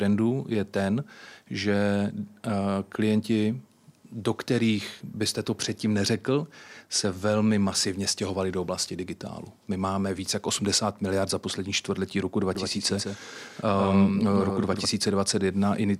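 At 12.55 s a doubled audio track appears and runs to 14.85 s. A second copy of the speech sits roughly 150 ms behind the original. It is a few dB quieter, about 5 dB down. The copy is full-band and dry, with no decay or room sound. It cuts in and out abruptly. The effect is a hard, stuttering double. This likely comes from a second, slower capture path or two misaligned copies in an edit.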